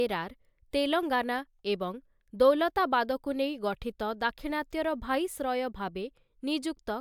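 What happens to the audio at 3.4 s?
Nothing goes wrong at 3.4 s: the speech runs on continuously through that moment, with no dropout, click, glitch or other fault audible there.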